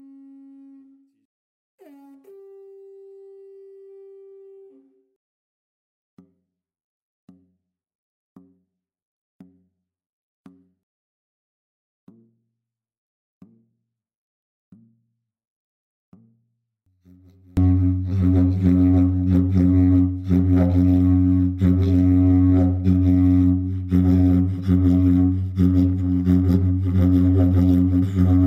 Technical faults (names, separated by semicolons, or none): one channel inverted